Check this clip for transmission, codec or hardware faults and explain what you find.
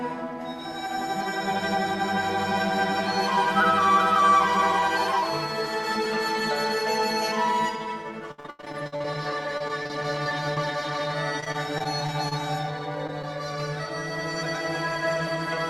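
Transmission faults appear in the second half: three stretches of repeated packet loss, then two isolated short concealed losses.

Repeated packet loss (robotic sound) at 8.31 to 9.06 s, 9.58 to 10.58 s and 11.40 to 12.33 s: holes arrive in quick succession and each is patched by extending the previous sound. The result is choppy. The first stretch is worst, with about half its length synthetic and gaps of up to 89 ms. The later two are thinner, around a seventh concealed.

Short concealed packet loss at 13.07 to 13.10 s and 13.22 to 13.25 s: each time about 20 ms went missing and was filled from the preceding sound, giving a brief smear or wobble. Unlike the robotic stretches, these are single events that do not recur.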